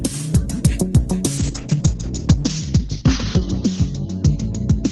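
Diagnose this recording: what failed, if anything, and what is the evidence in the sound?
From 1.39 s to the end there's a call bitrate drop, sitting at the codec stage but driven by the network. The bandwidth estimate fell, so the encoder was told to spend far fewer bits, and the sound goes rough and muffled as the top end collapses from 20 kHz down to 8 kHz. The coarseness fits a rate cut from about 40 to 8 kbps, bottoming out for roughly 1.05 s, and nothing recovers before the clip ends.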